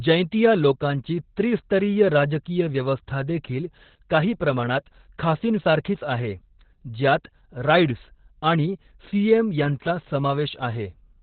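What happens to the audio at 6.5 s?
At 6.5 s the speech sounds muffled, hoarse and faintly robotic, with nothing above about 4.4 kHz, and it sounds that way for the whole clip, not just at this moment. The cause is Opus voice compression in its narrowband SILK mode. At a rate that fits roughly 8 kbps, the coder cuts the band to telephone width and models the voice's excitation so coarsely that its natural breathiness and detail turn rough and synthetic.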